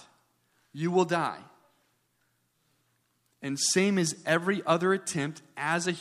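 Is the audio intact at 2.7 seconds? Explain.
Yes, the audio at 2.7 seconds is intact, with no dropout, click, distortion or other fault at that moment.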